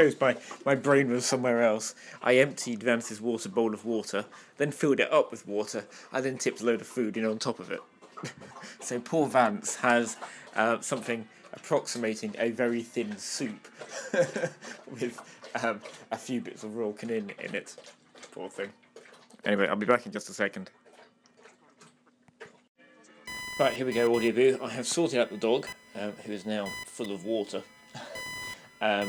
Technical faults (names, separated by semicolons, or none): computer activity noise